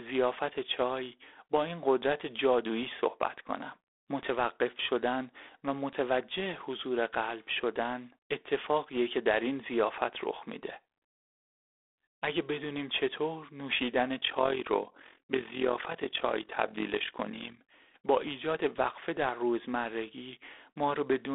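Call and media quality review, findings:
G.726 ADPCM throughout: harsh, rasping hiss riding on the speech level, band limited to 300 Hz–3.6 kHz, nothing above 4 kHz. Plainly audible codec damage, fits 24 kbit/s mode. Coarse 3-bit difference coding against adaptive predictor raises quantisation noise.

Overlap-add ripple, 14.19–17.62 s: rough flutter, level swinging about 11 dB at around 40 Hz. Frame-based processing stage, resynthesis window overlap not summing to constant gain, so level dips and peaks once per frame.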